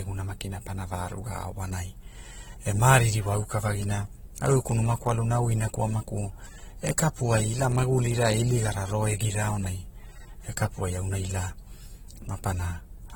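From start to finish the speech has likely been passed through transcoding between lossy codecs: a low-rate encode, consistent with roughly 24 kbit/s Opus, was then re-encoded as AAC-LC at a rate that points to about 48 kbit/s. The second encoder spends bits reproducing the first encoder's artefacts and adds its own, so both sets of artefacts sit on top of each other. Nothing is present above 19.3 kHz.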